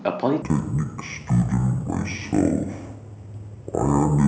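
From 0.42 s, stereo read as mono: interleaved samples play sequentially, giving half-speed speech an octave low, plus a faint mirrored upper band on the spectrogram.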